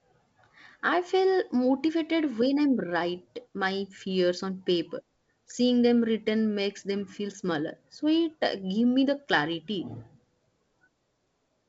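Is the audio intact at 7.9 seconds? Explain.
Yes, the audio is intact at 7.9 seconds, with only the light hiss and the top end stopping around 7.7 kHz that come with G.722 wideband telephone coding at 56 kbit/s.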